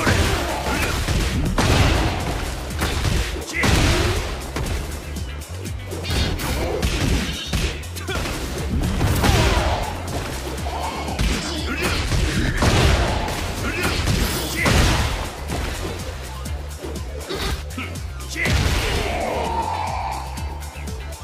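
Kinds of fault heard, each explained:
Dropped buffer (overrun): Four sudden jumps forward occur at 2.8, 6.64, 14.92 and 16.28 s. Each jump skips a short piece of sound, around 40 ms at 2.8 and 16.28 s and around 70 ms at 6.64 and 14.92 s. No gap of silence is heard. The likely cause is the software failing to read its input in time, so the hardware overwrote that audio and the two sides were joined.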